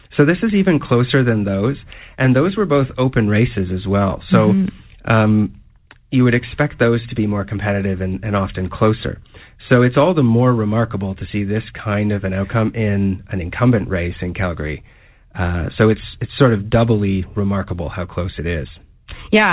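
No technical faults are audible.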